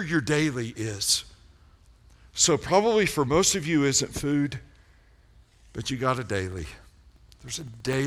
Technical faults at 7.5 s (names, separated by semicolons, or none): periodic USB or driver dropouts